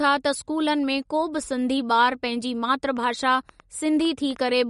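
From start to finish the speech has a watery, swirling texture, with sibilants turning metallic and chirpy and consonant onsets smeared, while nothing reaches above 11.2 kHz. This points to MP3 compression, likely at a bitrate around 48 kbps. Starved of bits, the encoder has cut the treble at a fixed ceiling and dropped weaker frequency lines that flicker in and out between frames, so the damage is plainly audible across the whole clip.

From 2.97 s to 4.37 s a train of clicks ticks over the speech, arriving unevenly at about 6.5 per second, roughly ten in all, and peaking at about the same level as the speech itself. The pulses share much the same shape and keep their uneven pace through the span, which likely traces to interference from nearby equipment or a faulty connection injecting repeated pulses into the signal.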